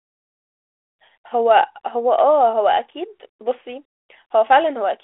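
Nothing in this speech clip stands out as a fault; it simply has the narrow 300 Hz to 3.4 kHz sound of a 32 kbit/s G.726 telephone link, the kind a DECT cordless handset would give, with only the light coding grain that comes with it.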